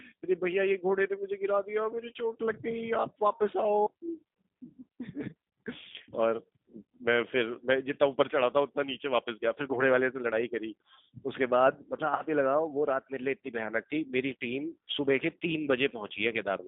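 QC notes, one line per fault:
Throughout: G.729 codec, speech band-limited to roughly 150 Hz to 3.7 kHz, with a rough, synthetic edge that fits an 8 kbit/s pulse-coded vocoder.
12.16 to 12.22 s: VoIP packet loss concealed by the speech codec. About 30 ms went missing, and the decoder stretched the last frame with fading gain before recovering.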